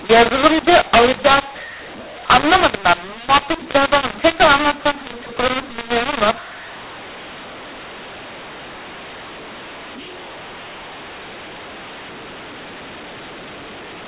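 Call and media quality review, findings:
Harsh, gritty distortion across the whole speech clip; levels scrambled, pauses filled with hiss. Mu-law and A-law mixed up: 8 kHz G.711 mu-law bytes decoded as A-law, remapping every sample's companding curve and lifting near-silent samples well above zero.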